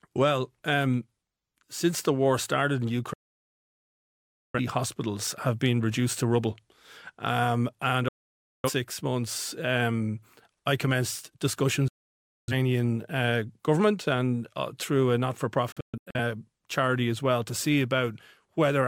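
At 3.13 to 4.59 s, 8.08 to 8.70 s, 11.88 to 12.53 s and 15.72 to 16.19 s, the speech cuts to silence with a quick 3 ms fade. That's a digital broadcast dropout: the receiver muted on bad frames, and the last one breaks into short holes.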